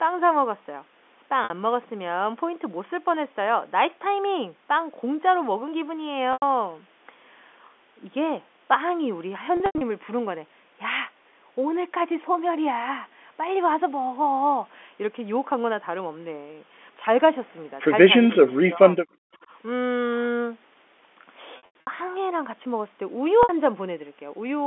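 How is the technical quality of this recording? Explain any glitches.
The recording is telephone-band speech, limited to roughly 250 Hz to 3.5 kHz as G.711 mu-law coding allows, and it carries two kinds of fault: repeated dropouts concealed by pitch repetition, and a pair of level collapses during double talk.

Packet loss with pitch repetition occurs at 1.44 s (60 ms), 6.33 s (90 ms), 9.57–9.81 s (150 ms lost, scattered over 240 ms), 21.57–21.87 s (210 ms over 300 ms) and 23.43 s (60 ms). The receiver fills each gap by looping the last pitch period and fading it out. The short gaps sound like a briefly held, buzzy tone. In the scattered bursts, runs of up to 90 ms fade into silence before the speech cross-fades back.

Speech is suppressed in double talk at 18.26–19.01 s and again at 19.22–19.41 s. The talker's level drops in pieces, by about 35 dB at worst in the first span, which affects roughly half a second. 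The second span is a brief dip of about 40 dB. This is likely an echo canceller that could not separate the talker from the far end's loudspeaker echo and attenuated both while the two sides spoke together.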